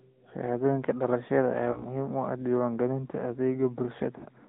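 From start to finish the speech carries the AMR narrowband mobile codec. Everything above 4 kHz is gone, and the voice has a buzzy, plainly synthetic edge. That comes from the codec rebuilding speech from a vocal-tract model driven by sparse pulses, and the level of damage points to a mid-rate mode around 10 kbps. A plain 4 kHz low-pass would sound dull but natural, without this buzz.

From 1.72 to 1.86 s, lost AMR speech frames cause a short dip with a warbling smear. About 40 ms of frames failed, pointing to two frames, and the decoder reused its last pitch and vocal-tract settings at reduced gain. The voice then returns slightly rough. The same thing happens from 4.18 to 4.26 s. Unlike a hard dropout, these gaps are smeared and tonal rather than silent or clicking.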